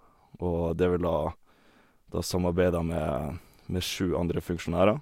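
No technical faults can be heard in this recording.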